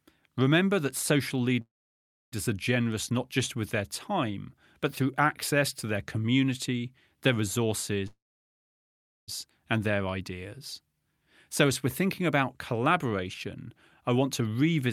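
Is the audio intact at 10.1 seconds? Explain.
Yes, the speech at 10.1 seconds comes through intact, with no dropout, click, distortion or other fault audible at that moment.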